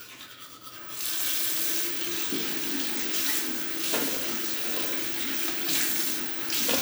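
Listening through this recording of sounds, nothing technically amiss stood out at any point.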